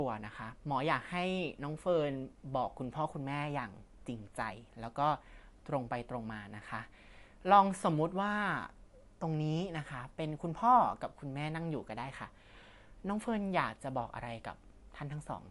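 The speech was likely squeezed through MP3 compression at a low bitrate, around 50 kbps, from start to finish. Starved of bits, the encoder removed everything above 11.3 kHz and dropped weak detail frame by frame, leaving a dull, watery, swirling sound with smeared consonants.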